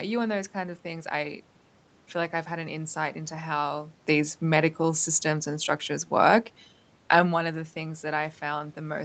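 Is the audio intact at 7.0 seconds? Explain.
Yes, the audio is intact at 7.0 seconds; the only change there is the talker's level shifting at the microphone, as when someone leans back or moves closer, which is not a fault.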